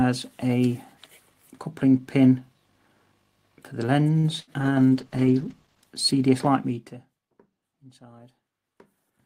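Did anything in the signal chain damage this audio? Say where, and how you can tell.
Yes. A short stall from a late packet at 4.19–4.27 s: the jitter buffer ran dry and the sound is held for 44 ms, with nothing lost. On a spectrogram it appears as a smeared, frozen band.

A burst of packet loss follows at 4.40–4.50 s. About 80 ms is gone, and the 75 ms filled in its place shows on the waveform as a fading, repeated tail.

A call bitrate drop from 32 to 13 kbps runs from 4.64 to 5.95 s and bottoms out for about 1.2 s. The Opus encoder goes coarse, and the spectrogram's high band visibly cuts off.

Zipper noise occurs between 6.58 and 7.23 s, where a gain stage lowers the level by roughly 20 dB in about 70 unsmoothed steps per second. It shows as a staircase envelope with faint vertical tick lines.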